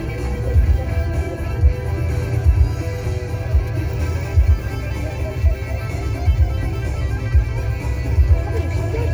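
Sounds, with no technical faults to be heard.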